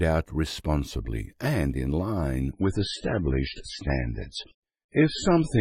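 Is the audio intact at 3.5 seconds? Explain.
No. An adaptive stream at a lower bitrate runs from 2.51 s to the end. The connection forced a sudden, gapless switch to a much leaner encode, which fits a drop from 128 to 16 kbit/s MP3. The audio loses everything above 10.5 kHz and carries heavier codec artefacts.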